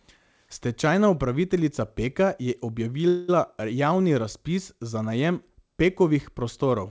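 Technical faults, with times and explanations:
3.08–3.30 s, call audio freeze: the last sound is stretched into a fading buzz, likely from late packets. Nothing is lost, but everything after runs about 0.2 s later.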